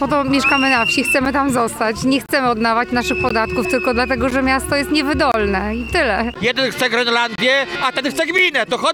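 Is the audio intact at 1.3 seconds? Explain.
No, not quite: a gap between stream segments at 1.25 s inserts about 7 ms of hard-edged silence. Unlike a dropout, nothing is lost; the sound simply resumes slightly late.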